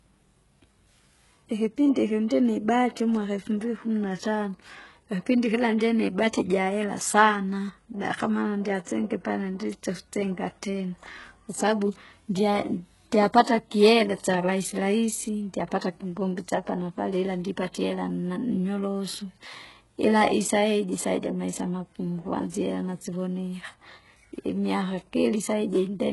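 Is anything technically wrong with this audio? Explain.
Yes. Throughout, the speech sounds like likely HE-AAC compression: nothing above 11.5 kHz, and copied-up treble leaves s sounds gritty and lispy, fitting a very low bitrate around 12 kbps.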